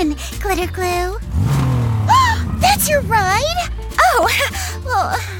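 From 3.75 to 4.55 s come CD scratch ticks: six clicks, each under two milliseconds, about seven a second. A disc blemish overwhelms error correction once per revolution, and the player patches the lost samples. A spectrogram shows evenly spaced thin vertical lines, and the waveform shows tiny spikes or notches.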